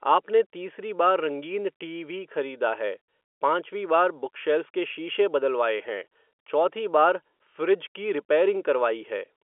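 No faults are audible anywhere in this recording.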